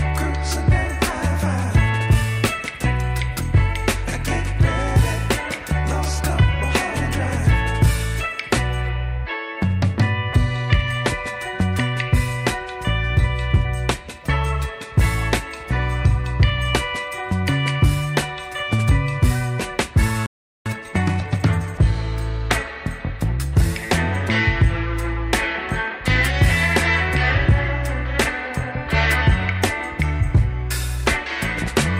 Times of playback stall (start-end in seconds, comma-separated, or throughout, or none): 20.26-20.66